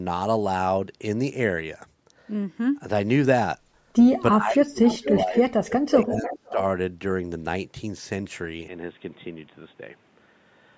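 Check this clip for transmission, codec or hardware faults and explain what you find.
Three faults are audible in this speech: suppression during double talk, two bursts of echo leak, and a late drop in input quality.

Speech suppressed in double talk, 4.38 to 6.59 s: over roughly two seconds the talker's level dips and breaks up, at worst by about 30 dB. The likely cause is an echo canceller ducking both sides at once. On a waveform the envelope shows ragged gaps; on a spectrogram, faded or missing patches.

Echo leak, 4.84 to 5.18 s and 6.24 to 6.53 s: a delayed copy of earlier speech returns 493 ms later, about 10 dB and then about 15 dB below the talker. This is likely unremoved loudspeaker pickup being sent back. A spectrogram shows faint repeated harmonic patterns offset by half a second.

Input switched to a poorer device, 8.68 s onward: with no gap, the sound turns dull and boxy and drops about 5 dB. 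The band narrows from the 8 kHz it reached before, and a new noise floor appears about 35 dB down. This is likely a switch to a narrower microphone or headset profile, seen as a sudden lowered spectral ceiling and a thicker background band.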